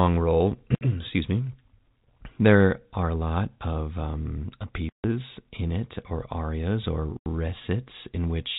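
Packets were dropped on the network path and the receiver played silence in their place, which is packet loss filled with silence. The speech gaps out at 0.75 to 0.81 s for 60 ms, at 4.89 to 5.04 s for 150 ms between "lot of um uh" and "in it or arias", and at 7.17 to 7.26 s for 90 ms. All three lengths fit whole 30 ms packets. Each hole begins and ends abruptly, inside the narrow telephone band of the G.711 coding.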